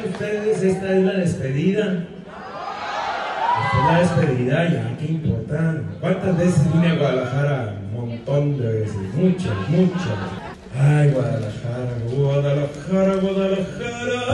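No technical faults are audible.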